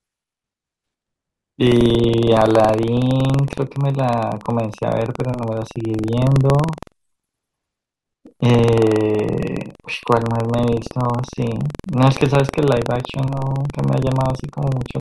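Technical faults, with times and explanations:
Throughout, buffer tearing: a 21.5 Hz rattle rides the speech, which fits a 2048-sample buffer. Each period hard-splices in a tiny slice of audio about 150 ms old.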